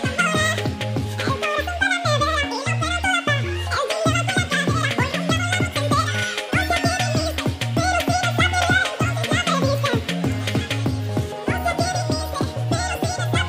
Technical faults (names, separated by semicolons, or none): audio read two samples at a time (double speed)